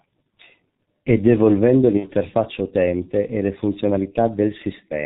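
Throughout, the speech sounds muffled and hoarse with smeared consonants, the heavy damage of the G.723.1 codec, whose narrow band and coarse 30 ms framing fit a 6.3 kbit/s rate. From 1.97 to 2.10 s, the speech is stretched and fades, and stays weak afterwards, as the decoder conceals about 60 ms of VoIP packet loss.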